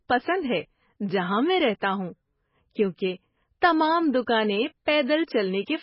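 Throughout the clip the speech carries heavy MP3 compression damage: nothing survives above 5.6 kHz, and weak spectral detail flickers in and out between frames, giving a watery, swirling texture and metallic sibilants. The damage fits a very low bitrate, likely around 16 kbps.

At 4.85 s a pre-echo appears: quantisation noise sized for a sharp attack spreads backward across the codec block into the quiet moment before it, producing a brief hiss about 11 ms ahead of the onset and softening the attack.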